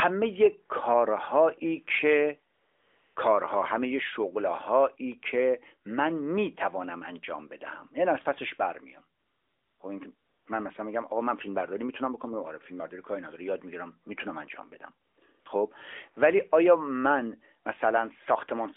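AMR comfort noise fills six pauses in this narrowband speech: 2.54–3.16 s, 9.20–9.80 s, 10.16–10.46 s, 15.08–15.18 s, 15.20 s and 15.40–15.46 s. The phone stopped sending speech frames. Smooth synthetic hiss replaces the real background, switching in and out.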